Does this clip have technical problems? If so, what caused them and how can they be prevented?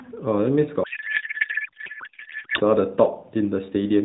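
Yes. From 0.84 to 2.61 s the narrowband AMR speech collapses into garbled warble that barely follows it. That's a codec payload misread: it sounds like octet-aligned AMR frames being unpacked as bandwidth-efficient, so every field gets decoded from the wrong bits. Making sure both ends negotiate the same octet-align setting prevents it.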